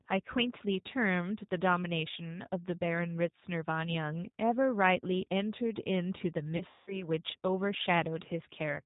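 Speech, coded throughout with the G.729 codec, likely G.729A at about 8 kbit/s. Nothing above 4 kHz survives, and the voice sounds rough and slightly synthetic. Between 6.57 and 7.04 s there is VoIP packet loss concealed by the speech codec. About 210 ms of audio is missing over roughly 300 ms, with the longest gap near 180 ms. The decoder stretches the last sound into a fading buzzy tone or coloured noise, and the voice stays weak or distorted for tens of milliseconds after the packets return.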